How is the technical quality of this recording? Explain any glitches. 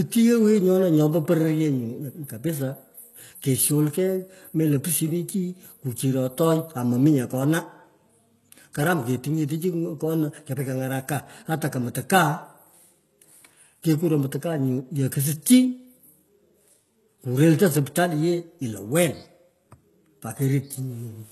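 Technical quality is poor: one fault runs through the whole speech recording.

Throughout, the sound shows plainly audible damage of the kind HE-AAC compression produces, likely from encoding at a very low bitrate, consistent with roughly 16 kbps. The codec keeps only the lower spectrum and rebuilds the treble by copying lower bands upward under a coarse envelope. So the s sounds come out gritty and lispy rather than crisp. On a spectrogram, energy stops dead at 12.3 kHz, and the band below that looks smeared and repetitive, echoing lower patterns instead of following the speech's own harmonics.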